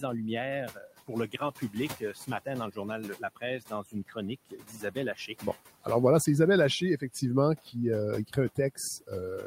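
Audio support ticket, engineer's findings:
Noise suppressor artifacts throughout. Background pulled down about 14 dB, pumping between and under phrases. Frame-wise band gains chasing steady room noise, which sits about 19 dB below speech.

Speech cut by the noise suppressor at 0.74–2.78 s, 3.18–4.17 s, 4.51–5.86 s (just before "voilà c'est") and 8.27–9.12 s. Soft consonants, word endings or quiet phrases swallowed, roughly a few hundred ms per span, drops about 15–17 dB. Suppressor misclassifying quiet speech as noise.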